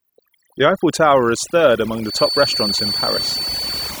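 Overdone noise removal runs through the whole clip. A noise reducer was pushed far too hard on a noisy speech recording, so every frequency band that drifted close to its noise estimate was cut deep or silenced outright. The gaps between phrases drop to near silence speckled with twinkling, chirpy fragments, and the softer parts of the voice are stripped away with the noise.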